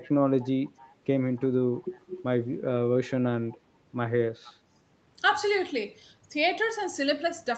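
An echo canceller at the far end likely left part of its loudspeaker signal in the microphone feed, so an echo leak returns the speech about 292 ms late at 0.01–0.11, 0.39–0.49, 0.65–0.94, 1.36–1.48, 1.72–2.01, 3.49–3.58 and 4.44–4.54 s. Each leak is a faint scrap, roughly 20 to 30 dB below the direct speech, faintest from 1.36 s to 3.58 s, within audio band-limited to 8 kHz.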